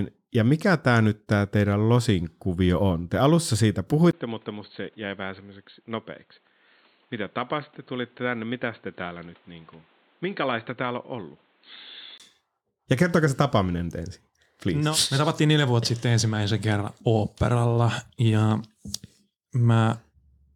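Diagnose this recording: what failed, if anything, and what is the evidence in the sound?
From 4.11 to 12.20 s the speech turns dull and boxy, with nothing above 4.3 kHz. It starts after a 20 ms gap, runs about 10 dB quieter, and carries a new noise floor roughly 35 dB down. That's likely an input switched to a poorer device at the driver stage, then back.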